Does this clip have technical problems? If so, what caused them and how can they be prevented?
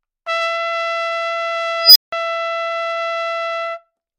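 Yes. An unstable filter fault occurs from 1.79 to 2.13 s: a tone near 5 kHz swells over about 160 ms as a recursive filter's feedback runs away, clips, overflows, and leaves roughly 170 ms of silence until reset. Keeping filter poles inside the unit circle and validating coefficients prevents it.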